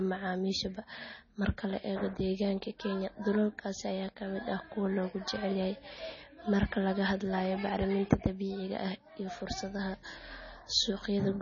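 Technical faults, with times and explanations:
Throughout, MP3 compression: treble stops sharply at 6.9 kHz and the speech sounds heavily watery and swirly, likely from a bit-starved encoder, which fits roughly 24 kbps.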